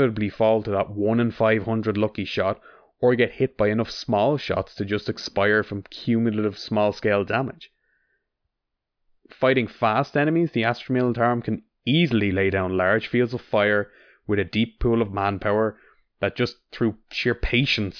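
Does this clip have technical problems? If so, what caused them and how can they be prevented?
No technical problems are audible.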